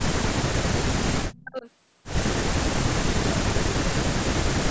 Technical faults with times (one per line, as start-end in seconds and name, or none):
0.05-1.66 speech suppressed in double talk
1.31-1.41 echo leak
2.38-3.45 speech suppressed in double talk
3.86-4.71 speech suppressed in double talk